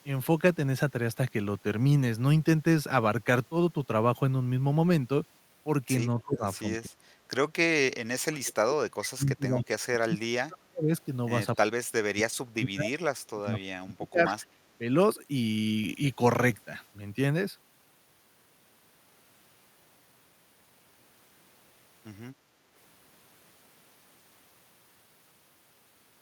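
An echo canceller likely struggling with both sides talking at once pulls the speech down in speech suppressed in double talk, at 6.24–7.14, 7.73–10.92, 11.68–12.94, 13.29–14.31 and briefly 14.79–14.86 s. The speech dips or cuts out in pieces by as much as about 40 dB. Within this stretch, likely incomplete cancellation at the far loudspeaker causes echo leak at 9.03–9.08 and 14.39–14.47 s, returning faint scraps of the speech 252 ms late. At 22.36–22.59 s, background gated by the echo canceller clamps the microphone, and room sound dips by about 6 dB before returning.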